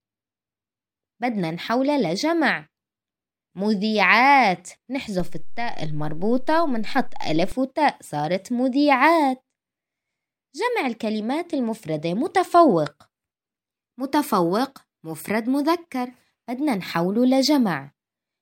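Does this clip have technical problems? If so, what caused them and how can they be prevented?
Yes: a DC step at 5.2 s, the zero line shifting by about -23 dBFS until 7.52 s. Thumps mark both edges regardless of the speech, unlike plosive pops. Prevent it by AC-coupling or high-pass filtering the input and letting converters settle before recording.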